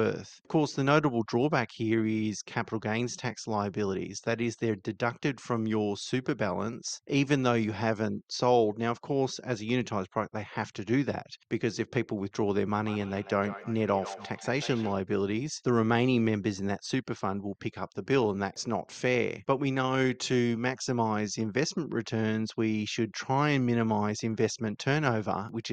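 It's a speech recording, and from 12.83 to 14.99 s there's a feedback echo between two devices: the sound comes back at a steady gap of roughly 150 ms, each return thinner and more ringing, peaking at about 14 dB below the speech. That's what you get when a second device in the same room replays the call and the first mic picks it up again, since neither echo canceller removes the other device's playback.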